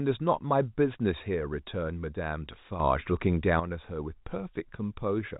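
From 2.8 to 3.6 s the speech and its background noise rise together by about 8 dB and then fall back. This is a sudden gain jump, likely a digital gain change applied from one sample to the next without a ramp, heard within the 4 kHz telephone band of the G.711 path.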